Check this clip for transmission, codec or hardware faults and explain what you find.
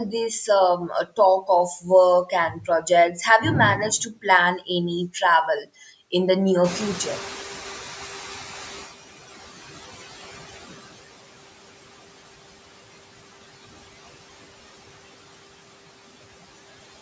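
Three noise suppression faults show up: artifacts throughout, speech cut in the first few seconds, and the suppressor catching up after a noise change.

Noise suppressor artifacts run through the whole clip. The suppressor pulls down the bands it judges to be steady noise by about 17 dB, frame by frame. The background dips in the gaps and swells back under speech.

Speech cut by the noise suppressor happens three times. From 0.47 to 1.49 s, a couple of hundred milliseconds of speech sink by up to about 17 dB. From 2.25 to 3.18 s, just before "have you", roughly 400 ms drop by about 10 dB. From 3.99 to 4.25 s, just after "have you", about 100 ms lose about 11 dB. In each case the suppressor mistook soft speech energy for noise, so endings and quiet consonants sound swallowed.

The noise suppressor catching up starts at 6.64 s, right after "in the". The room noise jumps by about 17 dB at around 6.5 s, and the suppressor's noise estimate lags behind it. 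The louder background comes through with less reduction at first and then sinks over about 2.4 s, settling near 9.0 s with about 17 dB of reduction.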